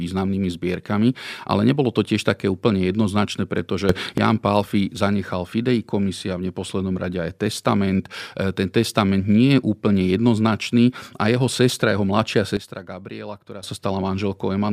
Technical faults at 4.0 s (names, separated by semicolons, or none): sudden gain jump